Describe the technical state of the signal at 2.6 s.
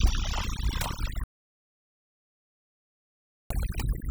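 At 2.6 s the signal is silence with no room tone, part of an audio dropout to silence running from 1.24 to 3.50 s. The input was likely lost while the recorder kept writing silence, so about 2.27 s of speech is gone. Around it, overdone noise removal leaves a lowered background breaking up into twinkling specks, because an over-strong noise reducer pulled frequency bands down along with the quiet parts of the voice.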